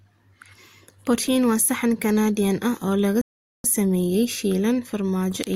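At 3.21 s, after "ah oo lagu", a rebuffering stall cuts the speech to silence. Playback starved of data. It resumes intact at 3.64 s, adding 0.43 s.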